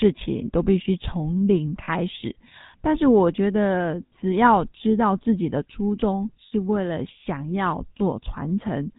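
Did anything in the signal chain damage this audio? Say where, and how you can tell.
Yes. At the codec stage, the GSM full-rate codec flattened the whole clip. The speech is buzzy and gravelly with nothing above 4 kHz, consistent with 13 kbps coding.

On the network, lost GSM frames were concealed by repeating the last good frame at falling level. This left short metallic rings at 1.84 s (40 ms), 4.06 s and 6.46 s (60 ms each).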